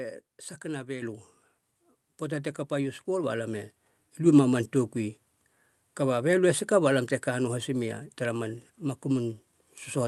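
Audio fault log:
1.02 s, microphone volume stepped up: the whole level jumps by about 7 dB in a single step, and the speech and the background noise under it rise together. That shared jump is the giveaway. The call software decided the mic was too quiet and bumped the device's input gain, rather than the talker getting louder. The step passes straight through the Opus call path, whose top end stops around 12 kHz.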